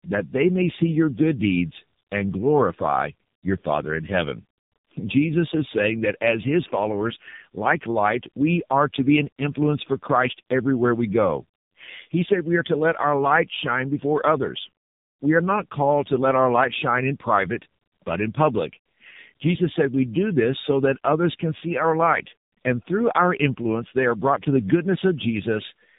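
Throughout, tandem speech coding: two low-rate speech codecs in sequence, likely G.723.1 then AMR-NB, each re-coding degraded output, leaving rough, warbly, muffled speech with nothing above 3.8 kHz.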